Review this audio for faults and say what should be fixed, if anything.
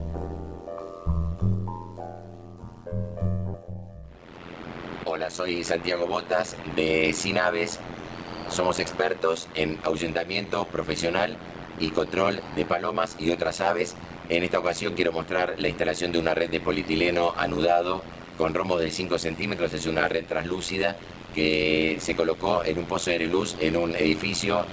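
The whole clip carries overlap-add ripple: the frames were windowed and rejoined with an overlap that doesn't sum to a flat gain, so the level pumps at around 100 Hz with a depth of about 60 dB. That comes across as a metallic buzz with extra tones around each note.

At 3.54 to 3.56 s there's a skip ahead. Roughly a second of audio was thrown away while later material was already queued, and the two sides are butted together with no fill. It's an abrupt jump forward rather than a dropout.

Right after that, jitter buffer speed-up kicks in three times as the receiver works off the backlog by snipping out pitch-period-sized chunks. From 3.63 to 6.02 s it runs 7% fast and sheds roughly 200 ms. From 8.48 to 10.52 s it runs 3% fast and sheds about 70 ms. From 11.39 to 13.13 s it's back to 7% fast and sheds about 150 ms. Pitch stays put, but the 7% stretches sound hurried. The band-limit above 8 kHz from the G.722 leg is expected.

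To fix it, use a window and hop pair that satisfies constant overlap-add, and give the jitter buffer a steadier target depth so bursts don't force big discards and long catch-up stretches.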